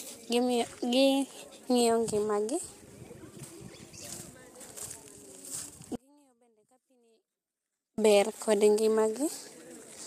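From the start the speech sounds rough and grainy, with noise between the harmonics. This points to low-delay AAC compression at a low bitrate, likely AAC-ELD, and unlike background hiss it tracks the voice.

From 5.96 to 7.98 s the speech cuts abruptly to a faint residue about 40 dB down, an audio dropout, returning at "ber kod". A pause would fade; this snaps, likely lost signal.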